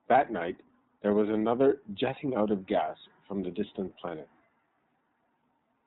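From the first moment to the last, the speech runs through the iLBC codec, and you can hear it plainly. Everything above 4 kHz is gone, so sibilants lose their edge and the whole thing sounds boxed in, like an old phone line. Each 30 ms frame gets its excitation coded on its own, and the bitrate points to the 13.33 kbps mode. That leaves the voice clear enough to follow but a bit rough and synthetic.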